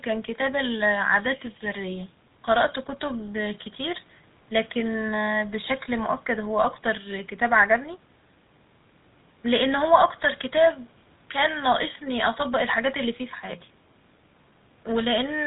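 From the start of the speech to its end, the audio carries the sound of the GSM full-rate codec, and the damage is plainly audible. The codec rebuilds the voice from a vocal-tract model driven by a sparse, regularly spaced pulse excitation, which fits a 13 kbps GSM full-rate link. Nothing above 4 kHz survives, so the top end is dull, while the coarse excitation lends the voice a buzzy, gravelly roughness.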